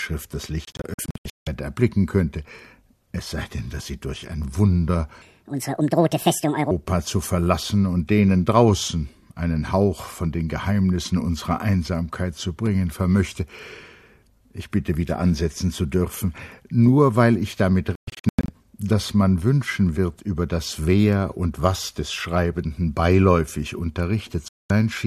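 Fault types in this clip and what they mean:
digital broadcast dropout: The receiver stops getting usable frames and mutes until clean ones return, so the audio in each gap is lost. It happens three times. From 0.65 to 1.47 s the sound breaks into several short holes, 456 ms missing in total, the longest 168 ms. From 17.95 to 18.49 s, 360 ms goes, the longest hole 120 ms. At 24.48 s a single 216 ms silence falls. The hole sizes fit frames of about 24 ms.
section at the wrong speed: From 5.22 to 6.71 s the audio suddenly runs 1.68 times too fast. Pitch and tempo rise together, so everything sounds hurried and shrill, roughly ten semitones high. Normal speed returns at once when the section ends. This is likely a playback or editing step that treated this stretch as if it had a different clock rate from the rest of the clip.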